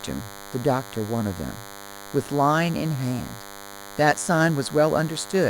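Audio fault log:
Throughout: DECT cordless phone buzz, a thin 100 Hz buzz rich in harmonics, well below the speech, from the 10 ms radio bursts of a nearby DECT phone or base station being rectified in the audio circuit.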